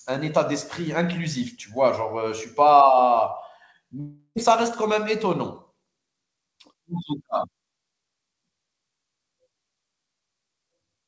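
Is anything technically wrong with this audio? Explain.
Yes, there's a gap in the speech from 4.00 to 4.38 s that sounds like a long network dropout: the receiver stretches the last sound into a fading buzz for about 0.36 s, there's a brief silence, and then the speech resumes with that stretch missing. The likely cause is packets that never arrived. Separately, the band stops at 8 kHz, which fits a G.722 call path.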